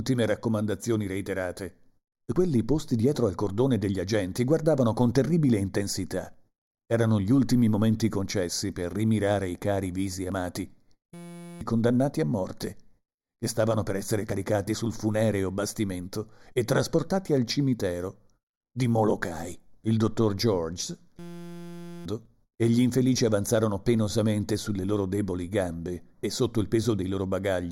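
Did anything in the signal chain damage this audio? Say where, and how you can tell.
Yes. Three separate faults are audible.

Channel delay (comb filtering) at the analogue wiring or channel-alignment stage: the whole clip sounds hollow and phasey, with a fixed first notch around 3 kHz. One channel lags by about 0.2 ms before the mono sum. Codec dulling would shift over time, but these notches never move.

Audio missing between chunks, at the driver or buffer stage: brief skips at 2.36, 6.34, 10.32, 14.30, 18.28, 22.25 and 26.23 s, each losing around 20 ms. The exact 4 s spacing points to a likely chunked recorder dropping audio at each handover. Random network loss would not keep such strict timing.

System hang loop, also at the driver or buffer stage: from 11.14 to 11.61 s and from 21.19 to 22.06 s, a 5.8 ms fragment repeats as a steady 172 Hz buzz, which fits a 256-sample ring buffer. 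Roughly half a second and a full second of audio are lost. A dropout would leave silence instead of this tone.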